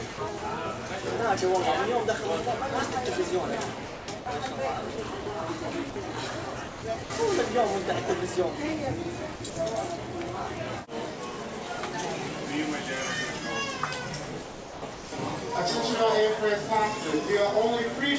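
From 0.14 to 0.42 s the sound breaks up, with brief patches of flat hiss cut in where quieter parts should be. The same choppy breakup returns at 3.86 to 4.26 s, 4.96 to 5.26 s, 6.68 to 7.10 s, 9.36 to 9.56 s, and most heavily at 14.42 to 15.12 s, where over half a second is replaced. This is likely sound chopped by the voice detector: the sender kept switching transmission off and on, and the receiver filled the gaps with comfort noise.

At 0.88 s and again from 5.90 to 5.96 s the sound gives way completely to steady noise for 20 ms and then 60 ms before resuming. This is likely sound dropped by the voice detector, which mistook that audio for background and stopped sending, leaving comfort noise in its place.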